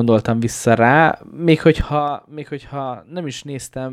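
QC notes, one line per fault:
1.77–2.14 s, zipper noise: during a level drop of roughly 10 dB, the gain moves in coarse 3 dB jumps, about ten times a second, with no smoothing between them. Each jump abruptly rescales the waveform, leaving a tiny discontinuity that sounds as a click. Strung together across this 0.37 s stretch of speech, the clicks form a fast ticking, zip-like texture on top of the voice while the level falls.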